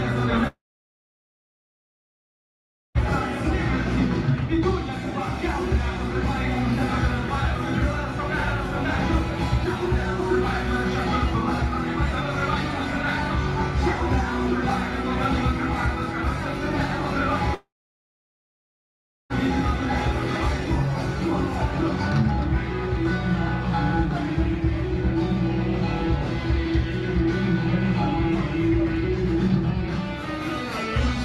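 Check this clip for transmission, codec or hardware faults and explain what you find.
Two gaps stand out. Long network dropout at 0.47 to 2.98 s and 17.55 to 19.33 s: the likely cause is a stalled stream, with the last sound smeared into a fading buzz, then near-silence for about 2.4 s and 1.6 s before the audio resumes with roughly 2.5 s and 1.8 s missing.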